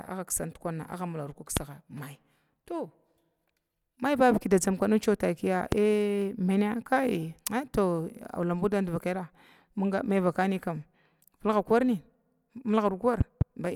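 Loud pops at 1.57–1.59 s, just before "my to", and at 5.72–5.75 s, right after "da dzamkw nudi maitakiya", then a double pop at 13.21–13.44 s, each peaking about 20 dB above the speech, which continues underneath. A likely cause is a sudden voltage pulse from a plug, switch, static or driver glitch.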